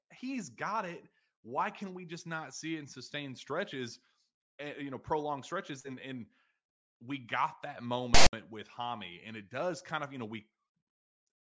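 At 8.14 s the speech is cut by file tags played as audio, lasting until 8.33 s. A block of text metadata followed by zero padding is being decoded as sample data. The text bytes come out as a harsh, loud rasp pushed off-centre, then the padding drops to dead silence. On the waveform it is a hard-edged, lopsided slab biased away from zero, then a flat line. The spectrogram shows a broadband smear with abrupt vertical edges.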